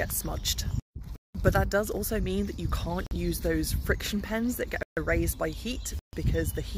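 Blocks of digital silence at 1.16 s (about 186 ms), 3.07 s (46 ms), 4.83 s and 5.99 s (139 ms each) cut the audio out abruptly and back. The output buffer likely wasn't filled in time; the longest gap fits an 8192-sample block.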